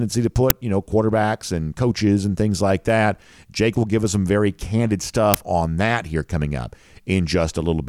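At 0.50 s and again at 5.34 s, there's a tiny, loud crack: an uninitialised buffer, where leftover memory played as sound, each about 5 ms, fitting a 256-sample block.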